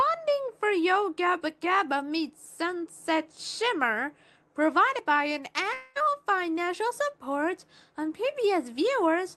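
From 5.73 to 5.97 s the sound gives way to a brief buzzy continuation of what came just before, a synthetic smear lasting about 220 ms that stands in for the real audio, before the sound resumes with that stretch missing and never reaching true silence. This is likely a long network dropout: packets stopped arriving, and the receiver concealed the gap by extending the last sound rather than playing what was lost. Throughout, the top end stops around 12 kHz, consistent with the call codec.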